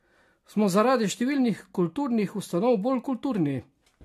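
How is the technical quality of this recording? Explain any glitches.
The quality is degraded throughout by generation loss. The speech was likely passed through a lossy codec such as AAC several times over, each pass requantising on a shifted frame grid so errors stack. Across the whole recording the result is swirly, hollow, smeared speech with blurred consonant attacks and nothing above 14.2 kHz, consistent with repeated encoding at around 64 kbit/s.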